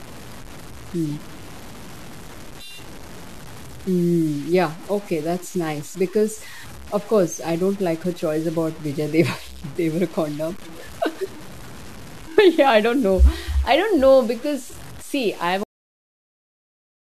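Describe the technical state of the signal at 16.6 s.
At 16.6 s the signal is digital silence: a cut-off end from 15.63 s to 17.13 s, where the final buffers were never written. The speech stops abruptly after "know because see I've" with no decay. Underneath the speech before that point there is grainy, signal-following distortion, likely from low bit depth without dither, consistent with truncation to about 6 bits, with the error only about 20 dB below the signal.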